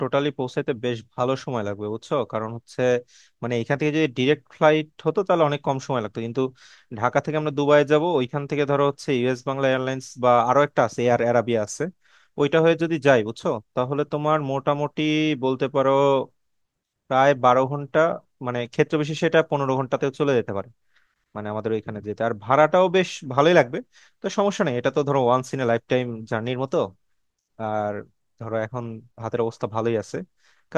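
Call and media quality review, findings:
No faults found: the speech signal stays continuous and stable throughout, with no audible defects in level, timing or bandwidth.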